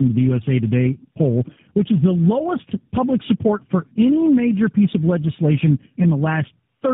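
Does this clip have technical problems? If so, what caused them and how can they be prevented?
Yes. Tandem speech coding runs through the whole clip: the speech has been decoded and re-encoded at several network borders. Each low-rate coder worked on the previous one's already damaged output, so the losses stack into a rough, muffled, warbly sound, which fits three different speech codecs in a row. On a spectrogram, harmonics look smeared and blotchy, with nothing above 3.7 kHz. Prevent it by passing the coded speech through unchanged between links (transcoder-free operation) or by using one codec end to end.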